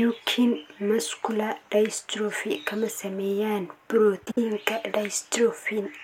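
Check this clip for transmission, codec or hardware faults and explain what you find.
One transmission fault is present: frames out of order from 4.25 to 4.38 s. Two adjacent blocks of about 52 ms each, consistent with two codec frames apiece, were decoded in swapped order, so this speech stretch flutters, with no time lost.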